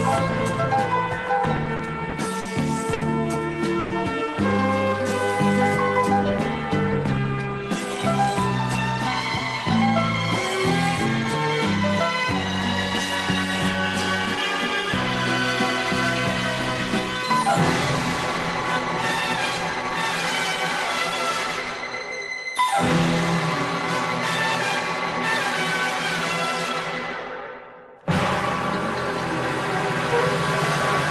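Packets reaching the receiver late or too slowly let the jitter buffer run dry six times between 1.45 and 2.47 s, producing repeated stalls (stutter): each time, the receiver extended the last sound until the next packet arrived, filling about 140 ms in total, or roughly 14 percent of that stretch, with the longest gap 50 ms. Nothing is lost, but the audio drags and catches in a choppy, hesitant rhythm. At 2.93 to 3.03 s a single packet failed to arrive on time, a short stall from a late packet: the buffer emptied and the receiver held the current sound for 80 ms before continuing from the same point, so one sound lingers too long with a faint buzz or dip. From 3.79 to 3.92 s comes a call audio freeze. The sound stops moving forward and is carried on as a fading buzz or hiss for 110 ms without dropping to silence, then resumes exactly where it halted, so a gap is inserted but nothing is skipped. 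The likely cause is packets held up in transit that left the jitter buffer empty. Later, between 27.59 and 28.03 s, the jitter buffer speed-up shows the opposite problem: with more audio queued than it aimed for, the receiver trimmed short pitch-period-sized pieces again and again, removing around 50 ms in all. Playback runs at about 110 percent of normal speed at unchanged pitch, sounding briefly hurried. Throughout, the audio carries the coding noise of the Opus call codec it passed through, with its frequency range capped at 12 kHz.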